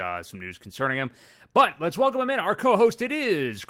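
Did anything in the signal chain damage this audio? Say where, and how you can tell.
Yes, at the network stage: a lost packet rebuilt from error correction at 2.47–2.49 s, just after "let's welcome him in". The waveform shows no gap, but the spectrogram shows a brief rougher, noisier patch, consistent with one 20 ms packet replaced by its low-bitrate copy.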